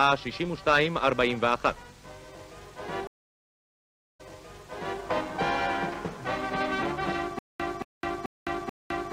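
At 3.07 s the sound cuts out, a stream reconnect. The connection dropped and the player fell silent for about 1.09 s. It then reconnected and started a fresh decoder partway through the stream. The server resent a burst of earlier data, so playback picks up about 0.84 s behind where it stopped. That stretch is heard a second time. The disturbance settles by 5.0 s.

From 7.39 s to the end, there is a stutter with silent gaps. A fragment about 227 ms long plays, then about 208 ms of dead digital silence follows. The cycle repeats evenly every 435 ms, four times over. The likely cause is a stalled stream, with the player replaying its last fragment at each retry before running empty. The audio meant for those moments never arrives.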